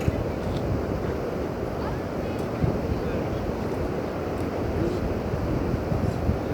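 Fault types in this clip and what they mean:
No faults can be heard anywhere in this recording.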